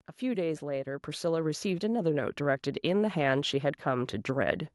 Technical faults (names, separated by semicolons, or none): microphone volume stepped up